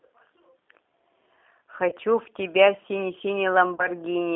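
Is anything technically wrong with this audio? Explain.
Yes, two faults are audible. G.729 codec coding runs throughout. Its low-rate pulse-and-filter model, consistent with 8 kbit/s, leaves rough, synthetic speech, band-limited to 250 Hz to 3.6 kHz.

VoIP packet loss concealed by the speech codec occurs at 1.89 to 1.96 s and 3.76 to 3.89 s. Each gap fits one lost 30 ms packet, and the decoder extrapolates a fading stretch that lingers before recovering.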